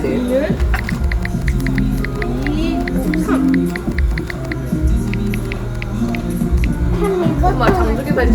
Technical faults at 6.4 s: none

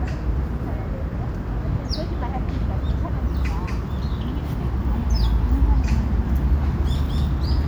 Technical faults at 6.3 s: none

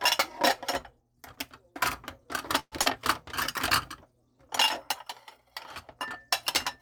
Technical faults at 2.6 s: call audio freeze

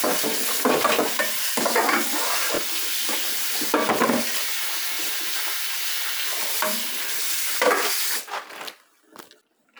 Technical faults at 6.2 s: repeated buffer

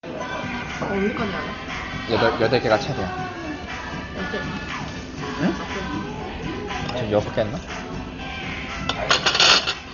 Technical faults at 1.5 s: Dolby Digital compression

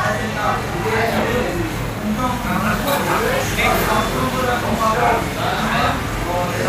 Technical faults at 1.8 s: channel delay (doubling)

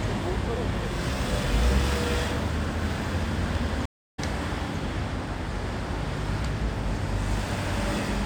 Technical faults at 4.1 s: stream reconnect

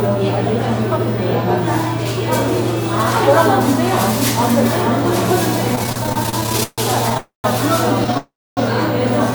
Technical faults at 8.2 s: repeated stalls (stutter); call audio freeze

